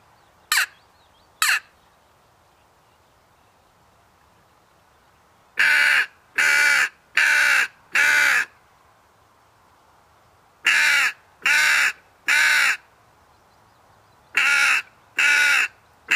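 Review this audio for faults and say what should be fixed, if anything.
Nothing in this audio needs fixing, as no faults can be heard.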